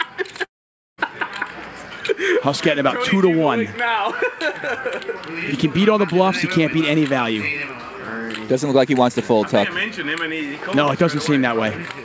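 From 0.44 s to 1.01 s the audio breaks off. The last sound is stretched into a buzzy hiss that fades quickly, and about half a second of near silence follows. Then the audio resumes, but the missing part never returns. The likely cause is a long network dropout: packets stopped arriving, and the receiver filled the gap itself. Throughout, nothing is heard above 8 kHz, which fits the G.722 call codec.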